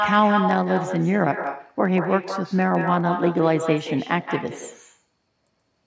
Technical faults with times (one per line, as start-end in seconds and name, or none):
0.00-5.86 echo with no canceller
0.00-5.86 block size mismatch (truncated)